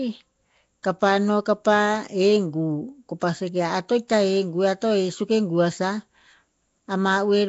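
Nellymoser compression runs through the whole of this speech recording, from start to finish, and the damage is plainly audible. The sound carries a rough, hissy halo and a smeared, underwater quality, and nothing reaches above 7.7 kHz. The likely cause is the Nellymoser Asao codec, at a rate that fits about 32 kbps. It codes short blocks at a fixed, small bit budget and fills the weaker bands with noise instead of real detail.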